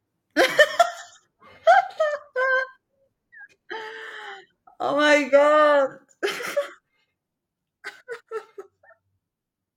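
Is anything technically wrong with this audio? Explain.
Yes, there's one problem: damaged data in the compressed stream, from about 5.82 to 5.88 s in this speech clip. For roughly 56 ms, part of the encoded data is corrupt, so the decoder can't make sense of those frames. It loses its place and hunts for the next valid frame header before normal playback resumes. What you hear is a brief chirp or blip that cuts through the speech at that moment.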